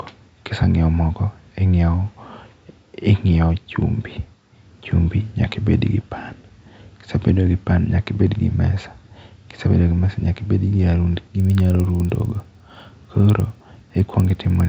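From 11.35 s to the end of the speech, a resampler restarted on every block corrupts the 16 kHz to 48 kHz conversion. Each 50 ms block is converted without its neighbours' samples, leaving an edge error every block, heard as a steady 20 Hz ticking that tracks the speech.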